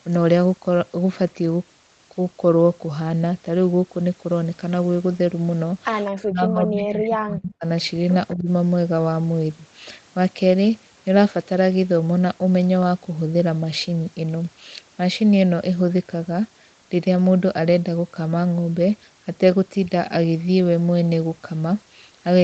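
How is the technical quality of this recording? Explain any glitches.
Two glitches stand out, close together.

From 6.2 to 7.65 s the speech dips hard, roughly 35 dB, then briefly again at 8.36 to 8.48 s by about 10 dB. This is likely speech suppressed in double talk, where the echo canceller ducked the talker along with the far-end echo.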